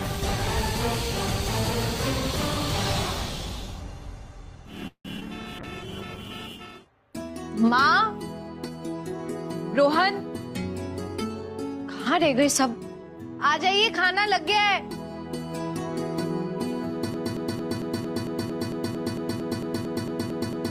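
At 4.87 s there's a call audio freeze, likely from packets arriving late. The last sound trails on, then about 80 ms of silence, 173 ms inserted, nothing lost.

Right after, from 5.17 to 5.20 s, a short concealed packet loss covers 20 ms that never arrived, leaving a quick smeared blip where the receiver patched over it.

Then at 5.20 to 5.23 s it does a skip ahead. Around 70 ms gets dropped, so the audio lurches forward with the two sides spliced almost together.

From 5.40 to 6.29 s the jitter buffer slow-down kicks in. Repeated pitch periods add 53 ms, so things drag at 95% speed without the pitch dropping.

Overlapping that, 5.61 to 7.31 s has a call bitrate drop from 48 to 15 kbps. For about 1.6 s at the bottom it turns rough, watery and dull.

Between 11.22 and 13.17 s there's a jitter buffer speed-up. Trimming roughly 150 ms of pitch periods pushes playback to 106%, so it feels a bit hurried.

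Finally, from 17.14 s to the end, a broken-record loop repeats the same 226 ms fragment back to back, likely from a stalled stream, and everything after it is lost.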